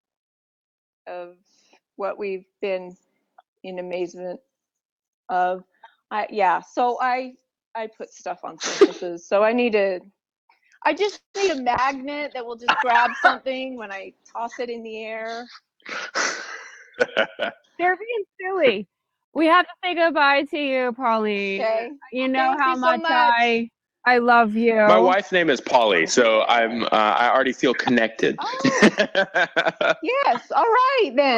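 At 11.15 s there is a call audio freeze, likely caused by packets held up in transit. The jitter buffer ran dry. The receiver stretched the last sound into a brief fading tail, then went silent for about 0.13 s. The whole stall lasts 0.21 s, ending at 11.36 s. When audio returns, it picks up exactly where it stopped. Nothing is lost. A gap of roughly 0.19 s has been inserted, and the call delay grows by that much.

From 11.48 to 11.51 s comes a short concealed packet loss. About 40 ms of audio never arrived in time. The receiver bridged the hole with only a few milliseconds of synthesised sound before blending back in. So this is heard as a quick smear or wobble. It also claws back roughly 40 ms of the delay added just before.

From 11.63 to 12.00 s the jitter buffer slow-down sets in. The buffer was rebuilding its reserve. It did this by repeating tiny pitch-period slices over and over. 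Playback runs at 89 percent speed with the pitch unchanged. About 46 ms of extra audio is added. The sound seems drawn out here, and it may carry a faint warble.

At 11.75 s a call bitrate drop begins. The bandwidth estimate fell, so the encoder went from 64 kbps down to 20 kbps. It stays at that floor for about 1.9 s before recovering by 16.87 s. Fewer bits mean coarser coding. The audio turns rough and watery. The top end is trimmed, which leaves it duller and muffled until the rate climbs back.

Two jitter buffer speed-ups follow. The buffer held more audio than its target, so the receiver cut out short pitch-period pieces in rapid succession. From 14.25 to 15.75 s playback runs at 109 percent. Roughly 150 ms is removed, and the sound feels hurried. From 17.80 to 18.43 s a milder pass runs at 106 percent and removes about 40 ms. Pitch stays the same throughout. Only the pace quickens.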